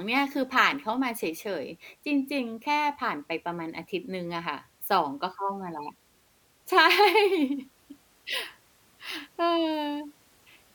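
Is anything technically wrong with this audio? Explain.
No, nothing is technically wrong with this audio.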